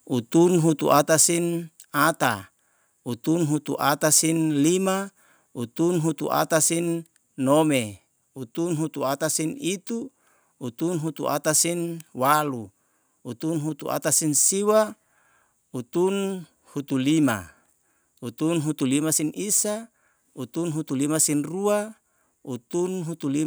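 Speech, with two faults at the start. At 0.92 to 0.98 s a short crackle appears, which is microphone overload, likely from input peaks about 2 dB past the converter's limit. At 1.02 s the microphone volume steps down by about 4 dB. Voice and background both drop at once, likely from call software lowering the input after that peak.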